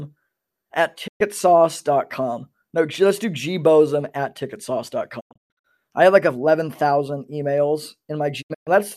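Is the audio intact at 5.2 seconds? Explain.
No. From 5.19 to 5.66 s the speech fades out and breaks into short silent holes, about 0.34 s lost in total. This is a digital broadcast dropout: the receiver muted on failed frames.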